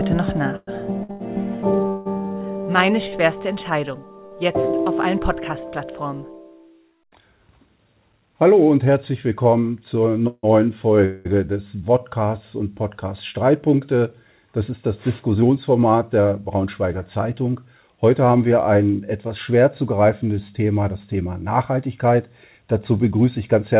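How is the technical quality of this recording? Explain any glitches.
The recording has clear network-timing glitches, and everything above 4 kHz is missing, a narrowband ceiling that points to a G.711-style call codec.

Repeated stalls (stutter), 0.56 to 3.14 s: packets kept arriving late, so the jitter buffer emptied five times. The receiver held the last sound each time, for 470 ms in total and up to 174 ms at once. The audio drags and stutters. A spectrogram shows smeared, frozen stretches.

Jitter buffer slow-down, 2.62 to 3.93 s (96% speed, 52 ms added) and 11.78 to 11.99 s (86% speed, 38 ms added): to rebuild its reserve, the buffer repeated single pitch periods. The sound stretches at unchanged pitch. The waveform shows near-identical repeated cycles.

Short stall from a late packet, 4.26 to 4.33 s: one packet missed its slot, and the receiver stretched the preceding sound for 51 ms before resuming where it left off. 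It is heard as a brief held, slightly buzzy sound. The spectrogram shows a short flat, frozen band.

Call audio freeze, 10.27 to 10.45 s (157 ms filled, the last 40 ms silent) and 11.05 to 11.27 s (200 ms filled): these are held-up packets that emptied the buffer, likely in transit. The concealment buzzes and fades, then the audio continues, leaving inserted gaps. The waveform shows a decaying envelope, with a silent stretch in the first.

Jitter buffer speed-up, 15.07 to 17.74 s and 21.70 to 23.76 s, both at 107% speed: excess buffered audio was trimmed by cutting short pitch-period pieces, about a fifth of a second and roughly 150 ms. The sound feels hurried at the same pitch. The waveform shows subtly compressed cycles.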